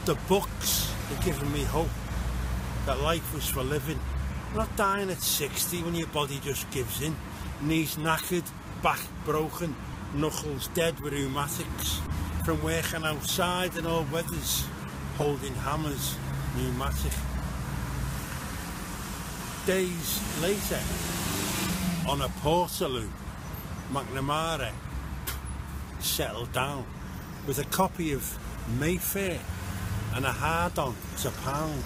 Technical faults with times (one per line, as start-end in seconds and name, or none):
9.92 corrupt frame decoded
12.05-12.09 corrupt frame decoded
15.20-15.24 corrupt frame decoded